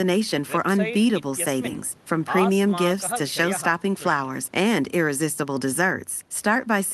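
No technical faults can be heard anywhere in the speech recording.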